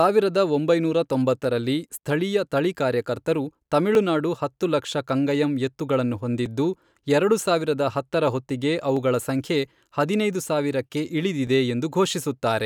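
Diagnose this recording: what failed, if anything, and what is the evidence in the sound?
Regular clicks at 1.44, 3.95, 6.46, 8.97 and 11.47 s: overlapping chunks at the buffer stage, each 2.5 s block replaying the previous block's last 7 ms.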